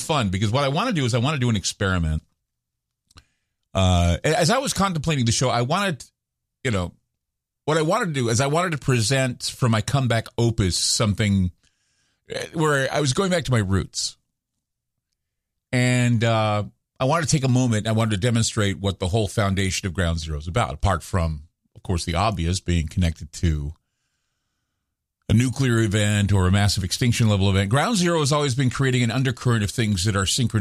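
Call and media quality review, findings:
Nothing stood out on listening to the speech in this recording.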